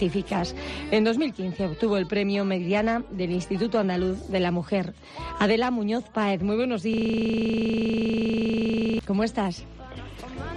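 From 6.94 to 8.99 s the playback gets stuck in a system hang loop. The machine stalled while the audio hardware kept replaying the same 40 ms chunk, about 51 times over. At 25 Hz that reads as a rough, machine-gun stutter, not a smooth buzz.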